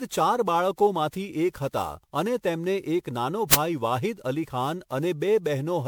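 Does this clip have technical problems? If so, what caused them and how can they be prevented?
Yes, two things stand out. The whole clip has that swirly, hollow, smeared character of generation loss, most likely from the speech being run through MP3 at 128 kbit/s around ten times over. Each decode and re-encode quantises again on a shifted frame grid, so the noise and spectral holes pile up and consonant attacks go soft, worse than a single 128 kbit/s pass would sound. Content still reaches up to about 21 kHz, so it's not simple bandlimiting. To prevent it, keep a lossless master and encode to MP3 only once, at the very end.

Then at 3.53 s there's a short, harsh blast of digital noise from an uninitialised buffer. A block of memory got played before any audio was written into it, so whatever junk was sitting there came out as samples. It lasts about 10.7 ms, which fits a 512-sample buffer. 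To prevent it, zero-fill buffers on allocation and make sure the playback callback never reads a block until it's been filled.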